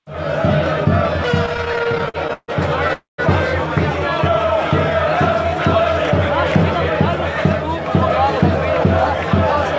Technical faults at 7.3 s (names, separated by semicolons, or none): none